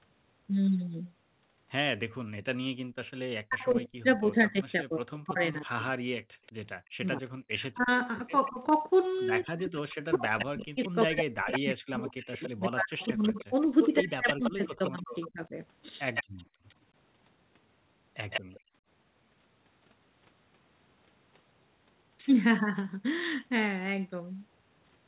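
From 3.44 to 15.56 s the talker keeps dipping, by as much as roughly 40 dB, and breaking up for around seven seconds in total. It's likely speech suppressed in double talk: the far side was talking too, and the echo canceller couldn't tell the two apart, so it pulled everything down.

Inside that stretch, at 6.24 to 6.82 s, the room sound suddenly drops by about 35 dB. That's background gated by the echo canceller, clamping the mic while the loudspeaker played. It happens again at 16.24 to 16.64 s (about 36 dB) and at 18.6 to 18.81 s (about 23 dB), returning each time it lets go.

There's also a faint delayed copy of the voice, about 30 dB down and 184 ms late, at 6.46 to 6.52 s and 8.45 to 8.72 s. It's likely echo leak, the far end's canceller letting some loudspeaker pickup back through. From 10.39 to 16.75 s and again at 18.3 to 18.6 s it gets much stronger, about 10 dB below the speech and 161 ms behind.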